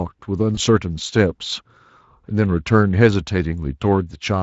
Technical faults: VoIP packet loss concealed by the speech codec

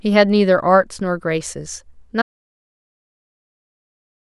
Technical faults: audio dropout to silence

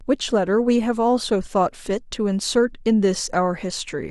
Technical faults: none

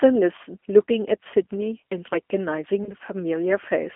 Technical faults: G.729 codec; VoIP packet loss concealed by the speech codec

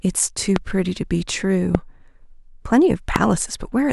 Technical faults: loud pop

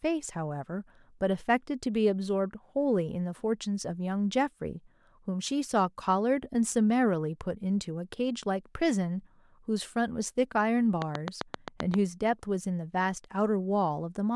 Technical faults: train of clicks

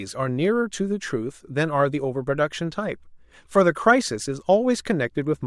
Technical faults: clock slip clicks

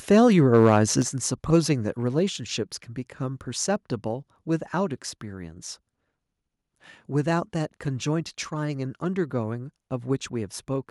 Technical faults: microphone overload; microphone volume stepped down

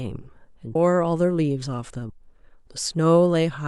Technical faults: compressed frames skipped

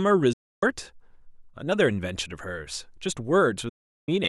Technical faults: digital broadcast dropout

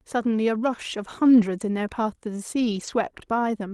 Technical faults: lost packet rebuilt from error correction

